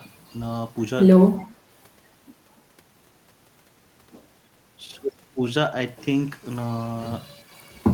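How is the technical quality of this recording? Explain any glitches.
Two brief glitches cluster in the speech around 1.4 s.

From 1.37 to 1.46 s, a faint, delayed copy of the speech trails about 341 ms behind, roughly 30 dB down: an echo leak, likely from a loudspeaker echo the far-end canceller missed.

From 1.38 to 1.51 s, the talker's level dips slightly, roughly 5 dB at most, for about a tenth of a second: speech suppressed in double talk, likely the canceller ducking both overlapping voices.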